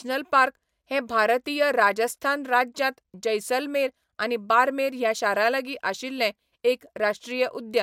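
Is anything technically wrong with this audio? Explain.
No, there's nothing technically wrong with this speech clip that I can hear.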